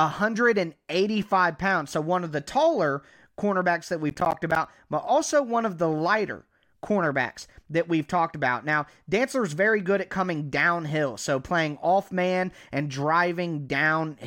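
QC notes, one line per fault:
4.10–4.64 s, processor overload crackle: after "the taller cornerbacks that" and before "but also one of", the speech breaks into a gritty tearing burst. The processor missed a run of buffer deadlines, around ten, each dropping in a short hole of silence, with spacing that fits roughly 10 ms buffers. On the waveform the speech is chopped by flat-line gaps with hard vertical edges. On the spectrogram each edge shows as a thin broadband vertical streak, clustered over about half a second.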